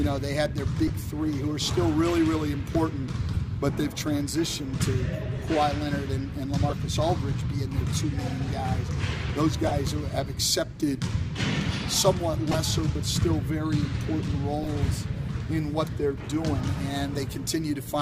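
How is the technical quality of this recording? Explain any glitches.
Seven short corrupt-frame glitches interrupt the audio. Each is a corrupt frame decoded: flipped bits misdirect gains and codes, producing brief chirps or noise bursts at 0.87–0.90, 3.34–3.36, 6.69–6.72, 9.67–9.72, 12.51–12.58, 14.63–14.68 and 15.72–15.74 s. The loudest peak near −10 dBFS and the quietest around −25 dBFS. On a spectrogram they appear as narrow vertical smears of misplaced energy. On the waveform they appear as sudden spikes, each lasting one to three frames.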